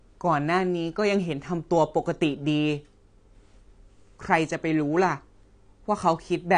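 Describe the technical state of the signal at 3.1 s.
At 3.1 s the speech sounds dull and smeared, with a warbling, fizzy edge on sibilants and nothing above 9.8 kHz. This runs throughout the clip and is likely AAC compression at a low rate, which fits 32 kbps AAC-LC starving and truncating the upper spectrum.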